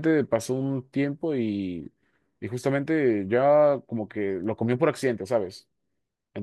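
At 4.44 s a bit error spike occurs: one flipped bit displaces a single sample to about -36 dBFS, producing a brief broadband tick.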